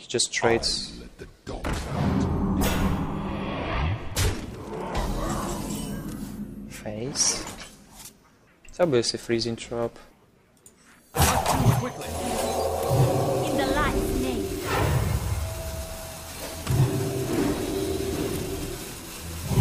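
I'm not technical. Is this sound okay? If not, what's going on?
Yes, it's fine; nothing here sounds wrong.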